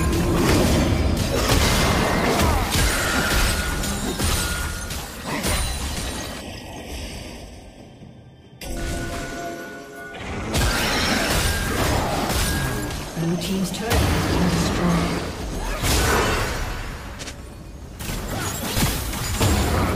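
From 6.41 to 8.77 s, channel delay (comb filtering) makes the sound turn hollow and phasey. One channel lags the other by a fraction of a millisecond. Summed to mono, they cancel at evenly spaced frequencies, with the first notch around 1.5 kHz.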